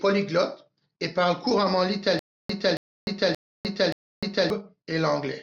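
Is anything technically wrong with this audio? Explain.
Yes. From 2.19 to 4.50 s the speech breaks into a stutter with silent gaps. A burst of about 276 ms plays, then about 302 ms of dead digital silence follows. The same burst returns four times, once every 577 ms. This pattern likely comes from a stalled player or stream. At each retry it replayed its last buffered fragment and then ran dry. The audio meant for that stretch never plays and is lost.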